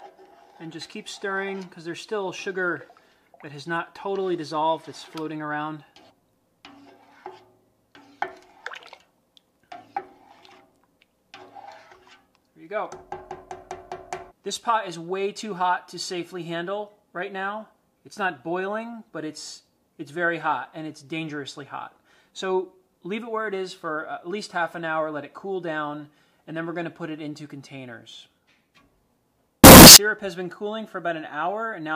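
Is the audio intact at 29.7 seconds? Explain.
No: a signed and unsigned mix-up from 29.64 to 29.96 s, likely 16-bit samples read with the top bit flipped, turns every zero crossing into a full-range jump, giving loud, harsh distortion.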